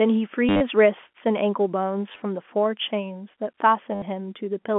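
Packet loss with last packet repeated interrupts this telephone-band speech, carried over G.711 coding with its usual 200 Hz to 3.4 kHz limits, at 0.49 to 0.61 s, 2.12 to 2.22 s and 3.95 to 4.02 s. The receiver replayed the last good packet to fill each gap, with runs up to 50 ms. Those repeats ignore the pitch, so the runs buzz at a rate that fits 10 ms packets, giving brief robotic stutters.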